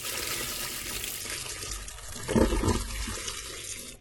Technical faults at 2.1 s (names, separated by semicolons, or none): adaptive stream at a lower bitrate